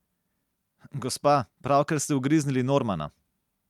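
A short speech recording with no technical faults anywhere in the signal.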